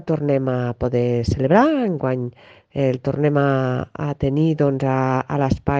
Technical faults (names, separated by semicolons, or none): none